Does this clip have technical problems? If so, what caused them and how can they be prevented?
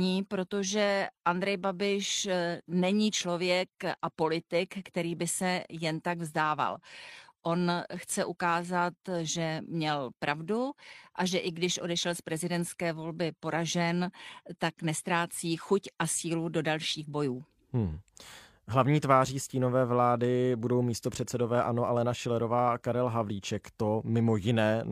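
No, this recording has no technical problems to report.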